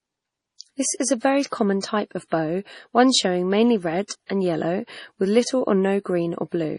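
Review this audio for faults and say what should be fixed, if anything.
Throughout the speech, nothing is heard above 10.5 kHz, and the sound is heavily watery and swirling, with chirpy s sounds and smeared attacks. This is likely MP3 compression at a very low bitrate, one that fits about 32 kbps. Short of bits, the encoder cuts the treble and switches weak frequency lines on and off between frames. A simple low-pass filter would only dull the sound without this shifting swirl. Encoding at a higher bitrate, or keeping an uncompressed master, would prevent it.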